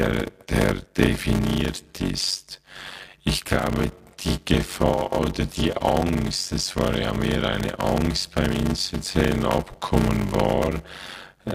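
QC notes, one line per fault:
Throughout, block size mismatch (padded): there's a steady buzz at about 93.8 Hz, and the speech drags at 0.625 times normal speed while the timbre stays put. Each short block is being zero-filled to a bigger read, which fits a 512-sample buffer.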